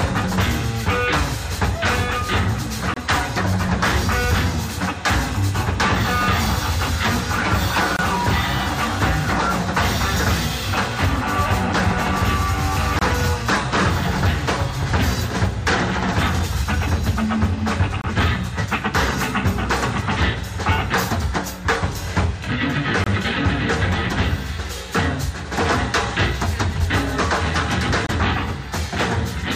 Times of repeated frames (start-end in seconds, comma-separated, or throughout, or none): none